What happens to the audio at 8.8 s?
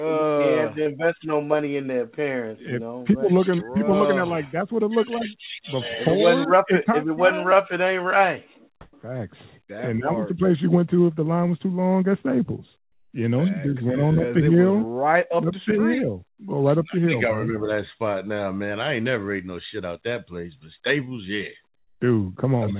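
From 8.81 to 8.93 s, about 120 ms, the real background gives way to a flat, featureless hiss about 22 dB different in level. This is likely comfort noise in place of the background: the sender paused transmission, and the receiver filled the gap with synthetic noise.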